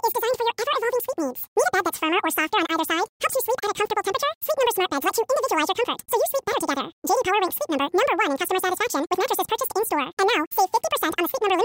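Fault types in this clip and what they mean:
Wrong sample rate: the speech runs the whole way through at double speed and a full octave high, chipmunk-style, which fits audio recorded at 24 kHz being played back at 48 kHz with no conversion, so pitch and tempo both jump by that same 2× ratio.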